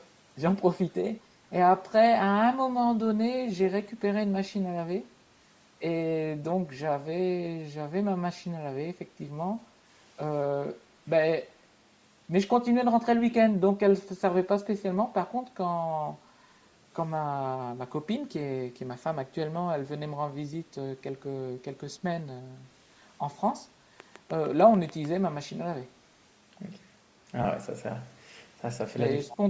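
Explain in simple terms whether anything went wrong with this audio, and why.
Several things went wrong in this speech recording.

Throughout the clip there is Bluetooth LC3 compression damage. The speech has a grainy, breathy edge because the upper part of the sound was thrown away and filled in with noise. This is likely from squeezing the audio through a Bluetooth LE Audio link at low quality. The missing bass and the lack of anything above 8 kHz come from normal call microphone processing, not from a fault.

At the very start, from 0.00 to 0.07 s, there is a brief echo leak. A faint copy of the sound arrives about a quarter of a second late. This is likely because the far end's echo canceller let a small scrap of its loudspeaker output back into its microphone.

From 24.0 to 25.06 s there is a train of clicks. About seven evenly spaced ticks, roughly 6.7 per second, sit on top of the speech and stand out above it. 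They are likely caused by electrical interference or a faulty connection or power supply injecting repeated pulses.

From 27.43 to 27.45 s there are lost LE Audio frames. Two short chunks of audio, about 20 ms in total, never arrived. The decoder patched the gap by reusing the last sound with scrambled detail, which produces a brief noisy smear.

From 29.25 s to the end, the speech is suppressed in double talk. The voice dips sharply for about 300 ms. This is likely because both sides spoke at once, and the echo canceller turned the talker down along with the echo.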